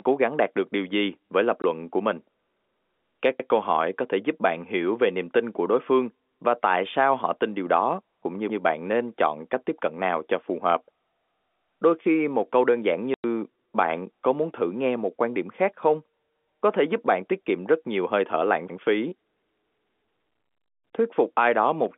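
Lost packets replaced with silence cut holes into this telephone-band speech recording. The 20 ms gap at 1.62 to 1.64 s, between "điều gì với lập" and "của mình", and the 100 ms gap at 13.14 to 13.24 s, between "một câu đơn giản" and "bạn có muốn thử", have hard edges, and their lengths fit a stream of 20 ms packets. Overlapping chunks, with each 5 s chunk starting before the previous one ends, make about 100 ms replay at 3.40 to 3.50 s just before "câu hỏi có thể", heard as a stutter. The G.711 A-law line coding, passing roughly 250 Hz to 3.5 kHz, is working as intended.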